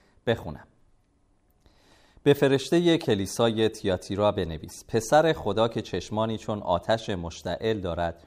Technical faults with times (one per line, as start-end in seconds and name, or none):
2.99 corrupt frame decoded
4.68-4.75 corrupt frame decoded